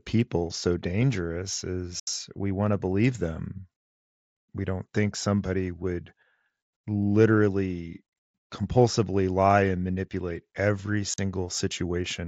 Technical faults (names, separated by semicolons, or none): block size mismatch (truncated); unconcealed Bluetooth headset packet loss